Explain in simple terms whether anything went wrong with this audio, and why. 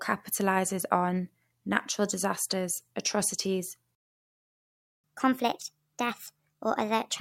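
At 3.95 s the speech just cuts out and there's dead silence until 5.04 s, a gap of about 1.09 seconds. That's a playback stall: the player stopped producing sound for a moment, most likely because it ran short of data or got held up, and nothing came out until it recovered. It's not a pause in the talking itself; the sound stops abruptly, right in the middle of things.

From 5.04 s to the end of the clip, the speech comes back running fast, at 1.25 times normal speed, and pitched up by roughly four semitones, so it sounds hurried and a bit squeaky. That's catch-up at higher speed: after the stall, the player sped up the audio it had fallen behind on to make up some of the lost time. Speed and pitch both rise together because the sound is simply being played back faster.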